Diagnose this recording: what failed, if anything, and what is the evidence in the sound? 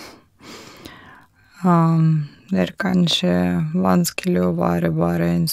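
A time-stretched section starts at 1.11 s and runs to the end. The speech abruptly slows to about 0.7 times its pace while pitch holds steady. The likely cause is editing software before storage, stretching this stretch by repeating short segments.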